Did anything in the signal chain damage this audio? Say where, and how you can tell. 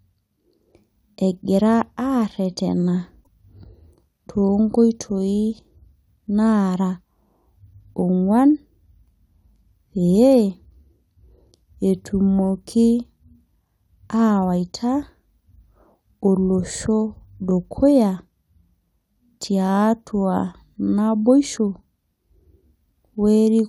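Yes: a broken MP3 bit reservoir at 3.23–3.28 s in this speech, likely from a codec-stage cut. The speech skips ahead, and roughly two 26 ms frames decode from the wrong bytes.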